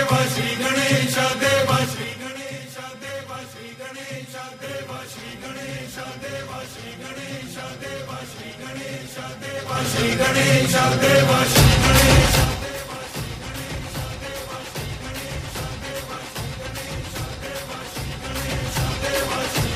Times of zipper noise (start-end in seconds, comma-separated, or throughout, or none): 1.76-2.41, 9.57-9.94